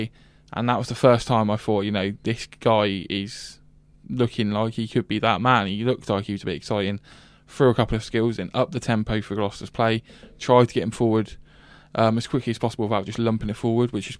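No technical faults are audible anywhere in the speech.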